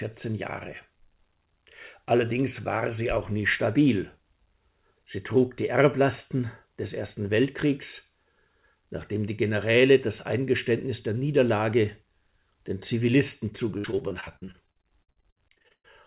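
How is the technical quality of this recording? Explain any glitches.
The recording is telephone-band speech with nothing above 4 kHz, which fits a narrowband call codec such as G.711. It has one glitch near the end.

From 13.78 to 15.89 s there is repeated packet loss, heard as robotic sound. About thirty holes, the longest 117 ms, are each patched by stretching the preceding sound, leaving roughly 38% concealed. Unlike a single dropout, the gaps recur rapidly, producing choppy sound with pieces missing.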